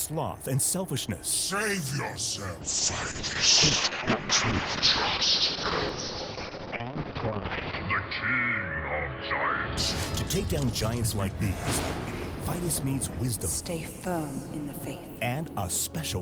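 From 2.62 to 9.83 s a call bitrate drop starves the encoder: the sound turns rough and muffled, and the spectrogram goes bare above 6 kHz.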